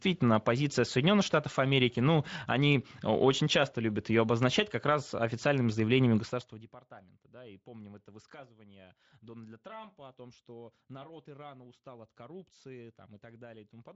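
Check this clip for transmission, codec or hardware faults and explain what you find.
No transmission, codec or hardware fault turns up anywhere in the speech. It carries only light Speex coding, which fits a fairly high setting of around 28 kbps, and its level rises and falls smoothly, as with a fader.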